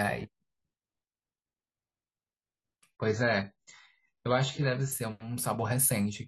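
From 2.92 to 4.92 s the adaptive stream switches to a lower bitrate. Treble vanishes above 7.7 kHz, fitting a drop near 16 kbit/s, without any gap.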